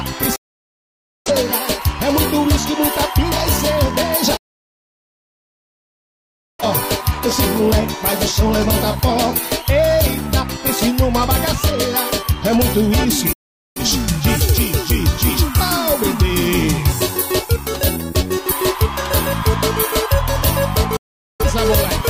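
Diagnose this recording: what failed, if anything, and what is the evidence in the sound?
The failure is in reception: a digital broadcast dropout. The sound fades to silence within about 8 ms and returns later at four points: 0.36 to 1.31 s, 4.37 to 6.64 s, 13.33 to 13.81 s, and 20.96 to 21.44 s. The gaps last about 0.9, 2.2, 0.43 and 0.43 s. The receiver lost good frames and muted until valid ones arrived. The hole lengths fit whole frames of about 43 ms each. The programme sent during each hole is gone.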